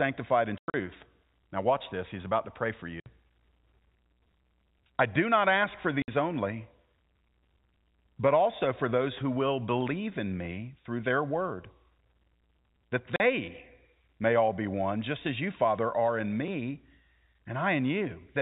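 Packet loss filled with silence cuts holes into the speech at 0.58–0.74 s, 3.00–3.06 s, 6.02–6.08 s and 13.16–13.20 s. Missing packets were replaced with digital silence, so each gap has hard edges. The first event is the worst: 140 ms dropped in scattered pieces over 160 ms, the longest run 100 ms. The later gaps last 60, 60 and 40 ms, which fits 20 ms packets, above the narrowband G.711 telephone coding.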